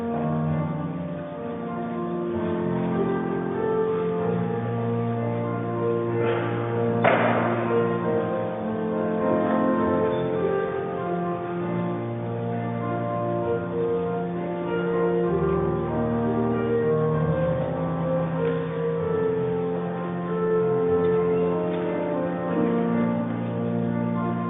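No technical faults are audible.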